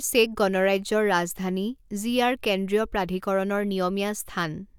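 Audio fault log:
No faults are heard in this speech clip. There is nothing to log at any point in it.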